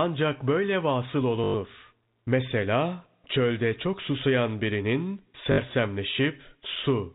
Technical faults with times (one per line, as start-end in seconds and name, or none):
1.44-1.54 packet loss with last packet repeated
5.52-5.58 packet loss with last packet repeated